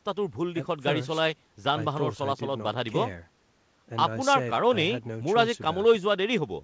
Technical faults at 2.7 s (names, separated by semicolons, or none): none